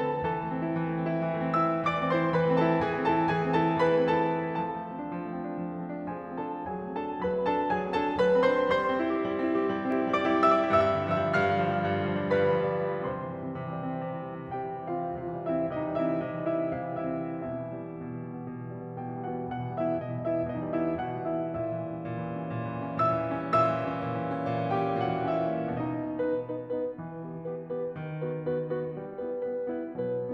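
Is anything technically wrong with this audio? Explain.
Yes. From 9.92 s to 11.52 s the music is briefly doubled. A second copy trails the original by roughly 0.4 s, around 5 dB quieter, and sounds dry and full-range, with no decay or room colour. It cuts in and drops out abruptly at those two points. This is a doubled audio track, likely caused by the same signal being captured again through a slower route, or by an edit that left two overlapping copies out of step.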